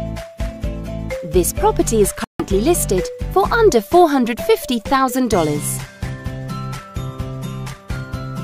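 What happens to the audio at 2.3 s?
The sound cuts out abruptly from about 2.24 to 2.43 s, then picks up further along, as if it kept playing. That's a Bluetooth dropout, likely from packets reaching the headphones too late.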